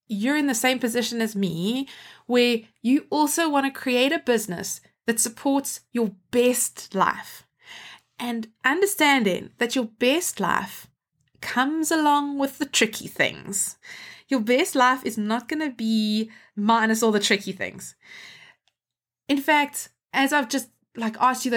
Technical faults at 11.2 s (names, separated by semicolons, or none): none